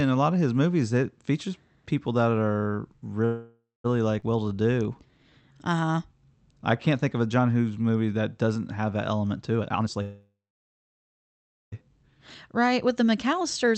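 Right after "features people that are", from 3.25 to 3.86 s, the speech stops and the last sound is drawn out as a fading buzz that sinks into about 0.18 s of silence before the talker resumes exactly where they left off. This is a call audio freeze: packets were likely held up in transit, the jitter buffer ran dry, and the receiver stretched the final sound to cover roughly 0.59 s. Nothing is lost, but the gap pushes everything after it later.

At 4.20–4.24 s there is an abrupt jump, a skip ahead. Around 0.2 s of speech is simply gone and the two sides are butted together with a tiny 19 ms join. That stretch was dropped, cutting the delay by about 0.2 s.

From 4.37 to 5.93 s the speech drags at about 86% speed with its pitch unchanged, and sounds are drawn out. This is a jitter buffer slow-down: the buffer was low, so the receiver repeated single pitch periods over and over, adding about 223 ms to rebuild its reserve.

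After "doesn't have that element", from 9.58 to 10.02 s, the talking suddenly rushes at about 168% speed, a jitter buffer speed-up in which roughly 0.3 s was trimmed away in small pitch-period pieces because the buffer held too much audio.

Straight after, from 10.02 to 11.74 s, comes a second call audio freeze, about 1.7 s long. A brief fading tail gives way to roughly 1.35 s of silence, likely another run of delayed packets emptying the buffer, and the speech then continues with nothing missing.

From 11.82 to 13.76 s the speech is hurried again at about 118% speed, another jitter buffer speed-up that removes around 0.4 s to bring the delay back down. Throughout, the call codec's band limit keeps the top end cut off at about 8 kHz.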